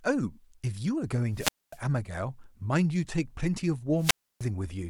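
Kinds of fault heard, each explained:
Wireless microphone squelch dropout: the speech twice gives way to a short surge of hiss and then a gap of near silence, 240 ms from 1.33 to 1.80 s and 300 ms from 3.97 to 4.46 s, as the FM radio signal faded and the receiver's squelch muted its output.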